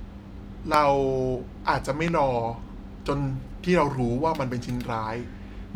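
Speech clip with two loud pops, at 0.74–0.76 s and 2.08–2.10 s, peaking well above the speech, likely from a voltage spike such as static or a switching transient.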